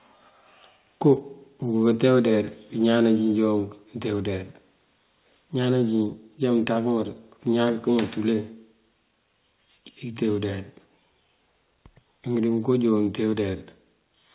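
At 2.82 s and again at 3.84 s, just before "nëte udeyar", the speech level drops abruptly by about 1 dB. This is likely the microphone volume stepped down by automatic gain control. The audio has no content above 4 kHz, which fits a G.711 call path.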